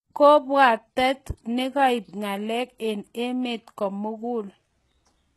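Throughout, the speech shows plainly audible HE-AAC compression damage: nothing above 12.3 kHz, and gritty, lispy s sounds from treble likely rebuilt by band replication at a very low bitrate.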